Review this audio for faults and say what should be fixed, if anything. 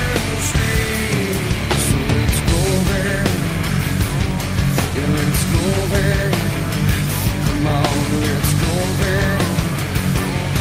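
Distortion runs through the whole clip, and the pauses never fall silent but fill with a steady noise. The likely cause is a stuck bit: one data bit held at a fixed value, so about half the samples land off by that bit's weight, and its flipping around zero turns quiet passages into noise. On a waveform, the quiet stretches show a stepped, jagged offset pattern instead of a flat line. A spectrogram shows broadband smearing across all frequencies from start to finish, with no clean gaps between sounds. To prevent it, check the converter and its data lines for a broken or shorted connection, and confirm every bit toggles on a test signal before recording.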